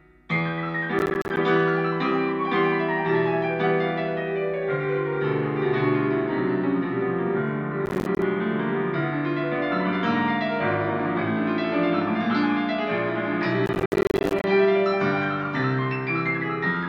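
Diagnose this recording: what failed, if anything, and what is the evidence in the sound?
The driver/buffer stage is where it went wrong: processor overload crackle in three bursts, 0.99–1.37 s, 7.86–8.22 s and a longer one at 13.66–14.44 s. The CPU kept missing its deadlines, so short blocks of roughly 10 ms dropped to silence with hard edges, dozens of them in that last stretch.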